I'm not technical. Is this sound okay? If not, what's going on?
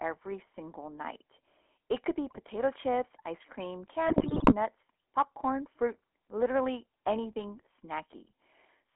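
No. GSM full-rate codec damage runs through the whole clip. The speech has passed through the old first-generation mobile phone codec, which rebuilds a voice from a rough model of the throat and mouth driven by a simplified buzz. That gives this recording a plainly buzzy, gravelly roughness, and the sound is confined to a narrow phone band from about 250 Hz to 3.4 kHz, so it sounds thin and muffled.

GSM bit errors appear at 2.28 to 2.39 s, just after "could be" and before "chips ice cream", and again at 4.06 to 4.54 s, right after "chips ice cream". The signal was weak enough that some of the digital data describing the voice arrived corrupted. The decoder then rebuilt those moments wrongly. The first is a brief glitch. The second is longer, about half a second of squawking, popping and gargling.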